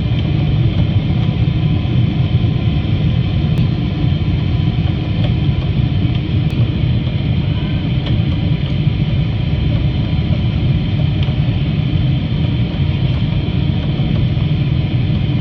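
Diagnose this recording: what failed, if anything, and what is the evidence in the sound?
Damaged data in a compressed stream shows as four brief bursts, at 0.89–0.93, 3.58–3.63, 6.51–6.55 and 10.64–10.68 s, each about 40–50 ms long. This is a codec-stage fault: corrupted bytes make the decoder misread frames, lose sync and hunt for the next valid header.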